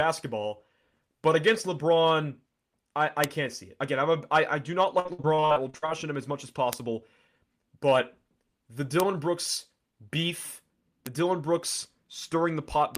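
Bit error spikes at 3.24, 6.73, 9.00, 11.07 and 12.95 s interrupt this speech as single sharp broadband ticks: one or two flipped bits briefly throw the sample value far off before it snaps back. Repeated packet loss (robotic sound) runs from 4.99 to 5.90 s, where about a dozen short holes, the longest 58 ms, are patched by extending the previous sound. That leaves the speech choppy, with roughly 40 percent of the stretch concealed.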